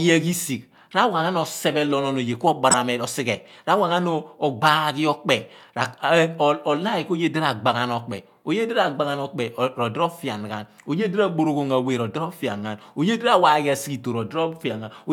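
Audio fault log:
2.70–2.77 s, corrupt frame decoded. A short, harsh burst of noise cuts into the speech, peaking at about -5 dBFS. Its length of roughly 60 ms fits about two damaged codec frames. Flipped bits inside the compressed data were not caught, so the decoder played the frames anyway. Misread gains and codes put strong energy at the wrong frequencies. The result is a sudden artificial blip that stops when clean frames resume.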